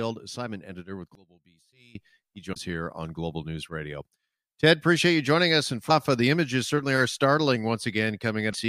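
A speech recording in which, from 1.15 to 1.95 s, right after "assignment editor with", the centred voice collapses by about 24 dB to a faint residue, which likely means one channel inverted so that the common content cancels on mono summing. Damaged data in a compressed stream causes short glitches at 2.52–2.56 s (before "here on"), 5.87–5.91 s (before "uh the images certainly") and 8.50–8.56 s. At each one the decoder misreads corrupted frames and resyncs on the next header.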